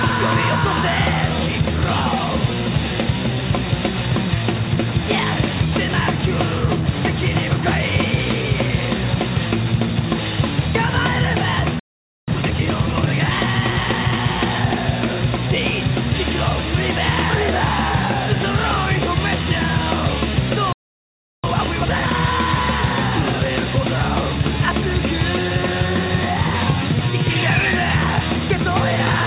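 At 11.79 s the sound cuts out for about 0.48 s, a playback stall, most likely the player running out of buffered data or its output thread being blocked. Output resumes at 12.28 s. From 12.28 to 14.20 s comes time-compressed catch-up: the player drains its backlog by dropping short segments and cross-fading the joins, so the audio runs at 1.25 times normal speed with unchanged pitch. A second stall silences the output from 20.73 to 21.44 s, about 0.71 s. It is followed by harder catch-up from 21.44 to 22.14 s at 2.0 times speed, which sounds noticeably rushed. Throughout, the band stops at 4 kHz, which fits a G.711 mu-law call path at 64 kbps.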